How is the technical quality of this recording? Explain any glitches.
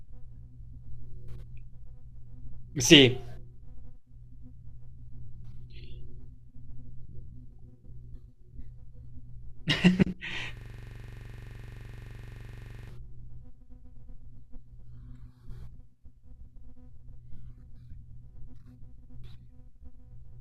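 One glitch. From 10.57 to 12.89 s, a system hang loop repeats one 43 ms slice of speech over fifty times. The system froze while the hardware replayed its buffer, fitting a 2048-sample buffer, giving a 23.4 Hz buzzing stutter.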